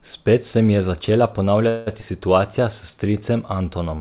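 Right after "se mi je začela", at 1.68 s, the sound stalls into a fading buzzy tail for about 0.18 s, then carries on at 1.88 s with nothing lost. This is a call audio freeze. Packets were most likely delayed in transit, the jitter buffer ran dry, and the receiver stretched the last sound until data arrived.

Shortly after, between 2.00 and 2.04 s, still just after "se mi je začela", playback jumps forward with only a tiny join. Roughly 70 ms of audio vanishes. This skip ahead happens when a stretch of audio is dropped while later audio is already waiting.

From 2.6 to 3.13 s the sound drags slightly at unchanged pitch, with held sounds drawn out, playing at about 93% speed. This jitter buffer slow-down comes from the receiver repeating single pitch periods to add about 48 ms of reserve. Throughout, nothing is heard above 4 kHz, which fits a narrowband call codec.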